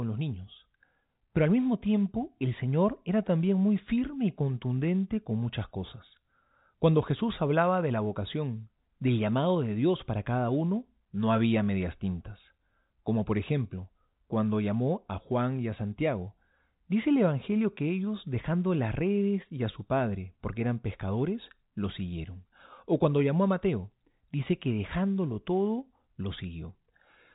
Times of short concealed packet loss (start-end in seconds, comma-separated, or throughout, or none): none